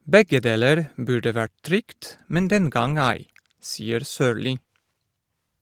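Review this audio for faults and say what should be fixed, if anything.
Nothing in this speech clip needs fixing. The Opus voice compression leaves only a light coding texture and keeps the full audio band, which fits a hybrid mode at a moderate bitrate.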